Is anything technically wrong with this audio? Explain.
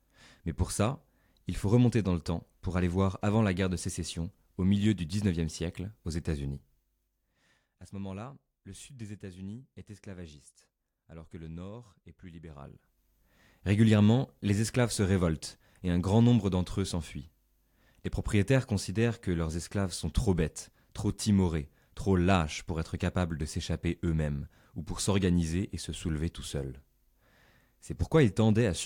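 Yes. Zipper noise: the level is changed in unsmoothed 3 dB jumps, each adding a click. From 6.46 to 7.78 s, after "siècle aux", it drops about 15 dB with roughly four ticks per second. From 12.45 to 13.07 s, after "le nord est plus", it rises about 15 dB as a faster zipping, around ten per second.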